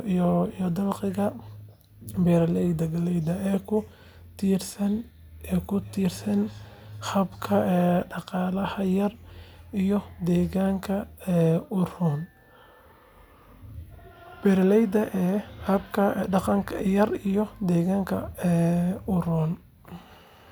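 A speech recording in which, from 5.76 to 8.03 s, each stretch of talking returns as a faint, delayed copy about 0.4 s behind the original, peaking at about 23 dB below the speech. This is feedback echo between two devices: two units in the same room share the call, one plays back what the other's microphone sent, and that microphone picks the playback up again. Each device's echo canceller removes only its own output, so the returning sound passes through.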